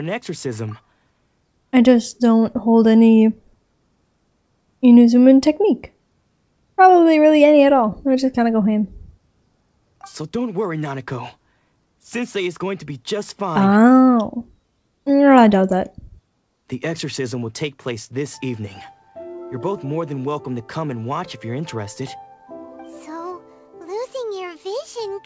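No technical faults turn up anywhere in the audio, which has passed through a call path whose band limit leaves nothing above 8 kHz, consistent with a G.722 link running at 64 kbps.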